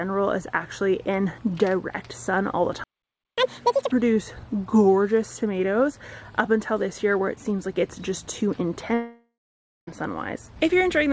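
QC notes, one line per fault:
2.84–3.38 s, playback stall: the sound stops mid-flow and the output goes silent for about 0.54 s. The gap is abrupt rather than faded, which points to the player running out of buffered data or having its audio thread blocked, the likely cause here. When output resumes, the player is about half a second behind.
3.38–3.91 s, catch-up at higher speed: immediately after the stall, the player works off its backlog by resampling at 2.0 times normal speed for about half a second. Because resampling changes speed and pitch together, everything sounds hurried and shifted up by roughly ten semitones, close to an octave, with a chipmunk-like quality. The half second spent at double speed recovers the time lost in the stall, and the audio then snaps back to normal pitch and pace.
8.94–9.89 s, long network dropout: no audio reaches the receiver for about 0.94 s, likely a network outage. 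The receiver's concealment first stretches the last sound into a buzzy, hissy tail that fades away, then leaves roughly 0.57 s of near-silence. When audio returns it has jumped forward, and the material from that missing stretch is never heard. Only band-limited content below 8 kHz surrounds the gap, consistent with the wideband call codec on this path.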